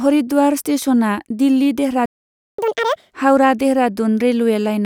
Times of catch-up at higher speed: 2.58-3.11

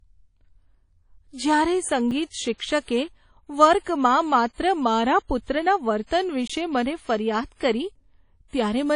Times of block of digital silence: 2.11, 6.47-6.50

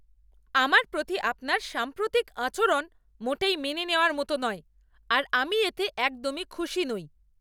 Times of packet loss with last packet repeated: none

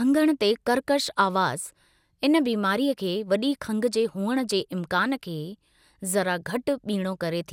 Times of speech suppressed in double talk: none

